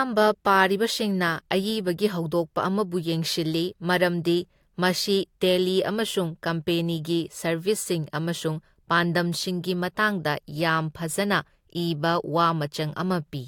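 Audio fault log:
No faults heard.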